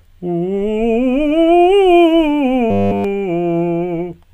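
From 2.70 to 3.04 s the music collapses into robotic sound from repeated short buffers. For that third of a second you get a stiff, metallic buzz pinned at 100 Hz, with the music's movement only faintly tracing through it, and essentially the whole stretch sounds repeated rather than fresh. The likely cause is audio arriving too late, so the playback side loops one tiny chunk over and over, and a 100 Hz buzz fits a chunk of about 10 ms.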